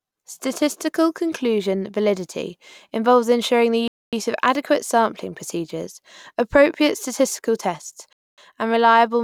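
At 3.88 s the speech stops dead for 250 ms, resuming at 4.13 s, and the same hole recurs from 8.13 to 8.38 s. This is a gap between chunks: the audio was delivered in 4-second blocks, and silence was inserted at each join rather than the blocks butting together. Nothing is missing from the speech; it is simply pushed later. The two gaps fall 4.25 s apart, one chunk plus one gap.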